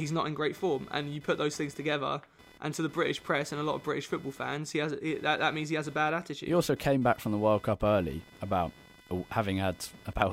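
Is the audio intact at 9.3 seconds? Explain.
No. Computer activity noise runs through the whole clip, including 9.3 seconds. Load changes in the computer disturb the audio circuit's shared ground. The result is a buzzy pulsing near 500 Hz, roughly 25 dB below the speech, independent of it.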